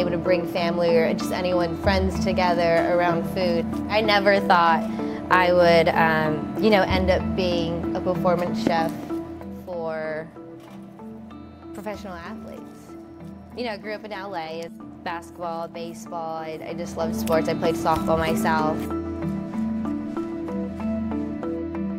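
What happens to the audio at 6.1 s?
Nothing goes wrong at 6.1 s, and the audio plays through that moment intact.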